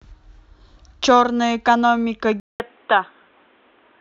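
At 2.4 s a 200 ms gap precedes dull, boxy speech, spectrogram blank above 3.9 kHz: likely input switched to a poorer device.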